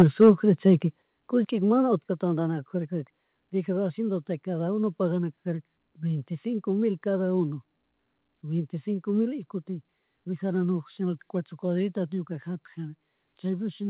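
The microphone's input level was likely set too high, so for the first 0.3 s, just before "chayka kushkika mana", peaks run about 6 dB past the converter's limit and roughly a tenth of the samples are flattened, giving those syllables a harsh, crackling edge. The input volume was then likely pulled down in single steps, by about 4 dB at 0.02 s, about 8 dB at 1.02 s just before "kushkika mana", and about 3 dB at 2.04 s right after "chayka kushkika mana". Each step drops voice and background together abruptly, heard through a call channel that carries nothing above 4 kHz.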